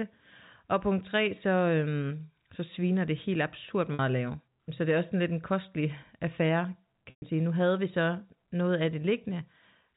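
Packet loss with pitch repetition hits this speech recording twice, at 3.94–3.99 s between "sviner det helt absurd" and "at lave", and at 7.10–7.22 s, over the narrowband telephone sound of G.711 coding. The receiver bridged each gap by looping the last pitch period. The 50 ms dropout comes across as a brief buzzy hold. The 120 ms one, which fits roughly a dozen lost packets, fades toward silence before the speech cross-fades back in.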